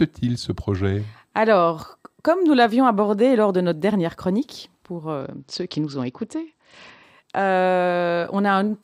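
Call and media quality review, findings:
Bluetooth SBC bit pool drop, 5.21–7.03 s, right after "notre dernière chronique pour". Congested link made the encoder cut its bit budget; fits bit pool 31 falling to 9, near 72 kbps. Top sub-bands starved, rest coarsely quantised: dulled treble, gritty noise until recovery.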